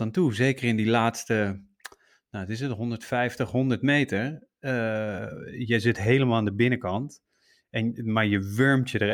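Nothing technically wrong turns up anywhere in this short bit of speech, so there's no fault here to point at or explain.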